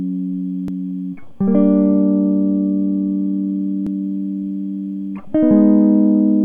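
At 0.68 s the music lurches forward a fraction rather than pausing. The same thing happens again at 3.87 s. Each is likely a dropped buffer (overrun), where incoming samples were overwritten before being read. Only a sliver of audio, on the order of a millisecond or two, goes missing each time. Because the two edges are butted together with no gap, this differs from an underrun's brief silence or stutter.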